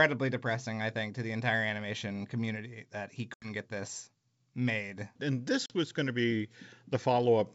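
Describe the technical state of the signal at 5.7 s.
Packet loss on an ADPCM call at 5.66–5.73 s leaves a silent flat waveform and blank spectrogram column, then "was going to be" resumes slightly distorted from the desynchronised predictor.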